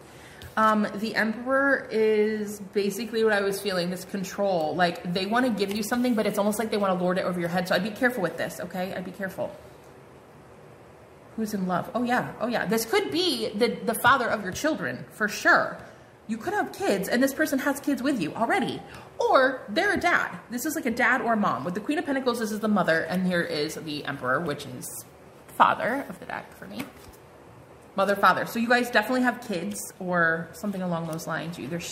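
Nothing technically wrong turns up anywhere in this audio, so there's no fault to point to, no time to flag and no cause to chase.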